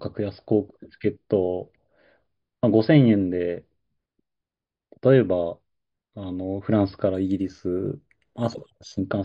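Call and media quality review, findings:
Imaging from linear upsampling, 7.15–9.05 s. Dulled top end, faint metallic shimmer on sibilants. Sample-rate converter taking 11 kHz to 44.1 kHz by straight-line interpolation. Weak filtering leaves mirror images around 5.5–11 kHz, about 30 dB below signal.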